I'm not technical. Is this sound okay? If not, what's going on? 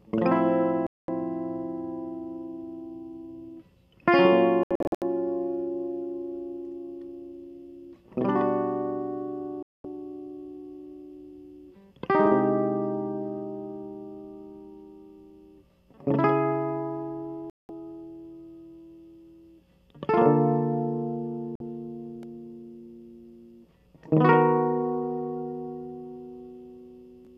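No. This music has a digital broadcast dropout, five times. The receiver briefly lost the digital signal or got damaged chunks of data, so it went silent until clean data arrived again. You hear short gaps at 0.87 to 1.09 s, 9.63 to 9.85 s, 17.50 to 17.70 s and 21.55 to 21.61 s. Between 4.63 and 5.02 s there are several tiny stuttering holes. The music from those moments is simply missing.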